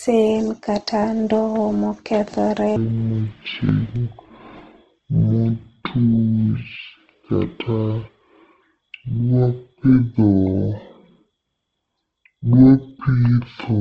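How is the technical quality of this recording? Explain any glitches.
The technical quality is poor: coding damage runs through the whole recording, and most of it plays far too slowly.

Throughout, the speech sounds rough and grainy, with nothing above 12.2 kHz. That points to Opus compression, likely at a low rate near 16 kbps, filling starved bands with noise. A spectrogram shows a hard ceiling and smeared texture.

From 2.76 s to the end, a section at the wrong speed plays at 0.527 times normal speed. Pitch drops roughly ten semitones together with the slowdown, so the speech turns deep and dragging. A waveform shows stretched syllables, and a spectrogram shows harmonics squeezed downward.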